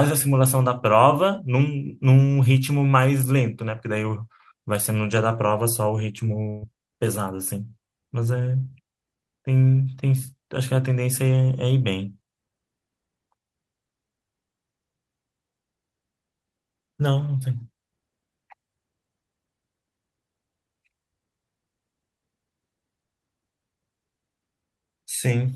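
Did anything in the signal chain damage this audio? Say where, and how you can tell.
Yes, network-side: a burst of packet loss at 6.49 to 6.64 s, where sound is held and fades, then resumes with 120 ms gone.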